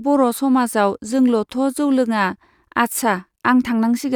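No technical faults are audible.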